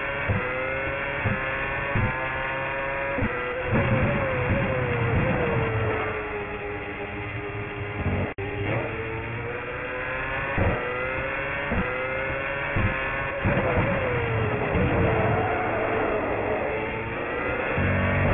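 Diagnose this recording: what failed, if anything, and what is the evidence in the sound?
Aliasing at sample-rate conversion throughout: energy above 3 kHz folds back as metallic grit, roughly 10 dB down, crowding a sharp 3 kHz spectrogram edge.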